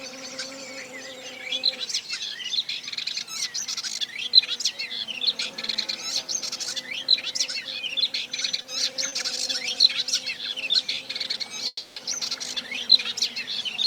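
Short stalls from a late packet occur at 8.62 s, 9.09 s and 10.95 s. Each time a packet missed its slot, the jitter buffer emptied, and the last sound was stretched by 20, 30 and 20 ms. The sound then resumed intact, heard as a brief hold with a slight buzz.

A call audio freeze runs from 11.67 to 11.98 s, likely caused by packets held up in transit. The receiver extended the last sound for about 290 ms as a fading buzz, ending in roughly 30 ms of silence before the audio picks up where it stopped.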